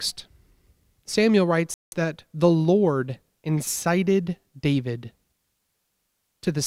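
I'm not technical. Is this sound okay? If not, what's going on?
No. Around 1.74 to 1.95 seconds there's likely a Bluetooth stall: the headphones ran out of audio while waiting for delayed data, so the speech drops out for about a fifth of a second.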